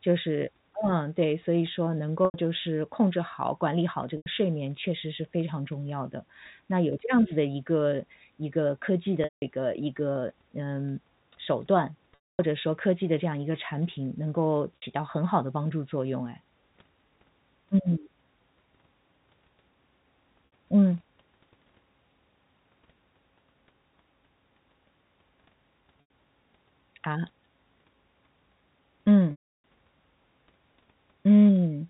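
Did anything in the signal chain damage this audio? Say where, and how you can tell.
Yes, in the network. Brief held, buzzy moments at 2.25, 4.17, 14.76, 20.46 and 26.01 s, and longer ones fading out at 9.24, 12.15 and 29.31 s (up to 330 ms), show packet loss with pitch repetition: the receiver looped the last pitch period to fill each gap.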